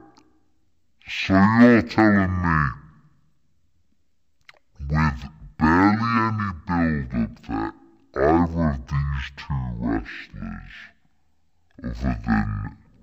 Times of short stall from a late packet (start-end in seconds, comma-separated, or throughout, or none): none